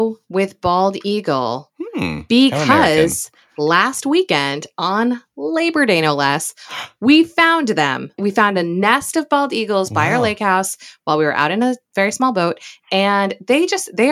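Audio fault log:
No faults can be heard in this speech recording. Nothing in the sound calls for an entry in the log.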